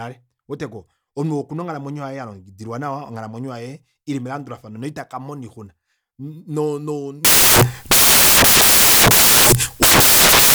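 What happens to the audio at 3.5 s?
Nothing goes wrong at 3.5 s; the speech carries on without any dropout, click or distortion at that point.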